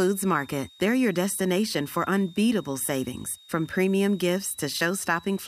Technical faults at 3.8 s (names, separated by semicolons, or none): switching supply whistle